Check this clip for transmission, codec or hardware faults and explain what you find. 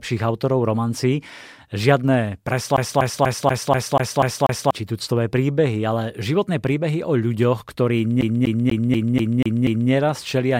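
CD stuck on one turn, from 2.76 to 4.71 s and again from 8.21 to 9.91 s. A scratch keeps throwing the laser back one track, so the same 0.24 s of speech repeats 8 and then 7 times, with a brief mute at each jump: the fast, even stutter of a skipping disc.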